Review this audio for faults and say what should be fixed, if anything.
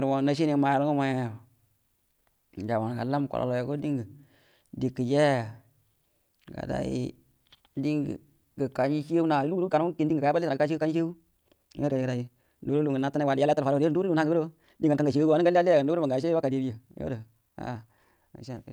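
From 9.11 s to the end, there's a time-stretched section: the speech is sped up about 1.73 times with the pitch held, so it sounds rushed. That's likely from software dropping short slices to fit a length. Fix it by re-exporting that part at its natural pace and trimming content instead of squeezing it.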